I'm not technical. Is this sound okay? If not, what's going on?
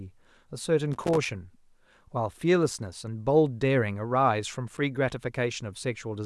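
No. There are two bursts of loose connector crackle, from 0.93 to 1.31 s and from 4.67 to 4.78 s. A worn or dirty plug contact keeps losing touch for split seconds. That chops up the speech and adds scratchy crackle.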